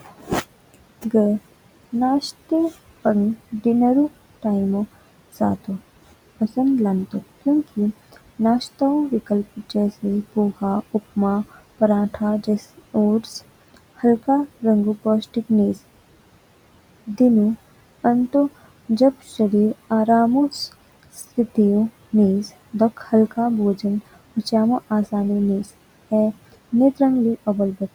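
Noise suppressor artifacts run through the whole speech clip: the suppressor pulls the room noise down by about 18 dB between phrases, so the background pumps under the speech. Speech cut by the noise suppressor occurs at 0.01–0.31 s and 22.97–23.12 s, where the suppressor mistook quiet speech for noise and lowered it by up to about 15 dB and 10 dB, leaving those stretches faint and swallowed. The room noise itself sits about 19 dB below the speech.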